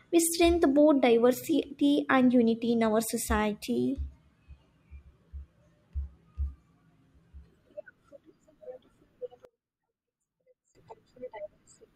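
From 9.45 to 10.75 s the speech drops by about 26 dB to a faint residue, likely one channel inverted, cancelling the centred voice in mono.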